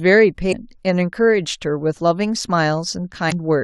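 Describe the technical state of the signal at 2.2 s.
At 2.2 s the speech plays through intact, with no dropout, click, distortion or other fault to be heard at that moment.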